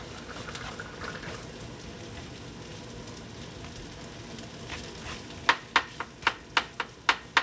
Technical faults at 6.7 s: none

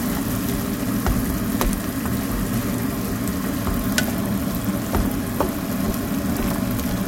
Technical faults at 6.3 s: filter restarted on every block; compressed frames skipped

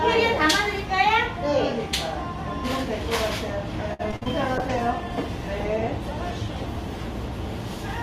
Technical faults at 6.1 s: call bitrate drop

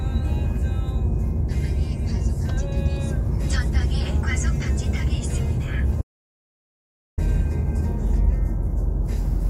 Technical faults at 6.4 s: audio dropout to silence

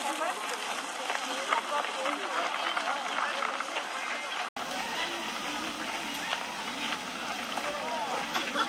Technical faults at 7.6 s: none

